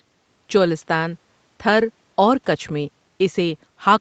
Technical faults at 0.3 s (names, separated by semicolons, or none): none